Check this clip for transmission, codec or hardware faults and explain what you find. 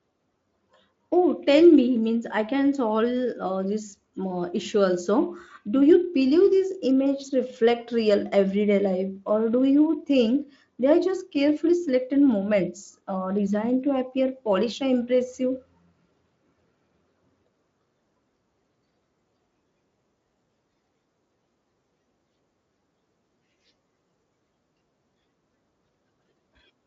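Nothing stood out on listening to this recording; no faults could be heard at any point.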